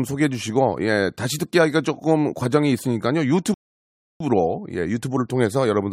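At 3.54 s the speech stops dead and the clip falls silent until 4.20 s. This is a rebuffering stall. The player used up the audio it had already downloaded and had to wait for more data before it could go on. The gap adds about 0.66 s of silence. When playback returns, it picks up at exactly the point where it broke off. No speech is skipped or repeated. The pause simply stretches the clip.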